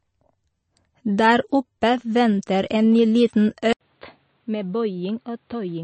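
From the start the speech sounds watery and swirly, with nothing above 8.3 kHz. This is likely MP3 compression at a low bitrate near 32 kbps. The flickering, unstable detail distinguishes it from a plain low-pass filter.

At 3.73 s, after an 80 ms silence, the sound turns boxy, stops at 4.6 kHz, drops about 5 dB and gains faint new background noise. This is likely the input switched to a poorer device. The shifts in tone and noise rule out a simple codec change.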